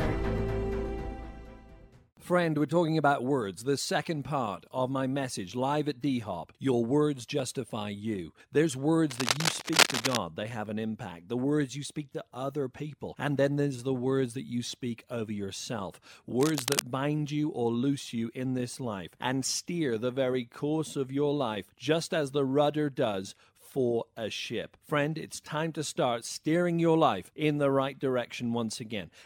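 Cable scratch noise appears from 9.10 to 10.17 s, roughly as loud as the sound itself, and again from 16.40 to 16.81 s, somewhat quieter. Each burst is dense, irregular scratching, likely from a worn cable or connector being moved so its contact resistance fluctuated.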